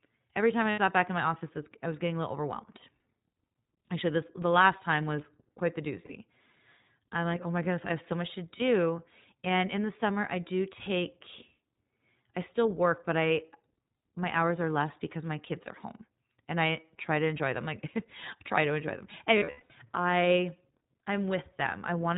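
Throughout, the speech is band-limited to 4 kHz with a plainly rough, synthetic edge, the iLBC codec's signature; the texture points to its 20 ms mode near 15.2 kbps. Lost iLBC frames fill gaps with a held, buzzy vowel rather than silence, and the speech recovers immediately. These occur at 0.70 s (80 ms), at 6.06 s after "quite the" (40 ms), at 8.58 s after "have so much to", and from 19.38 to 19.72 s after "try to enjoy them", where losses scatter across 320 ms with runs up to about a tenth of a second.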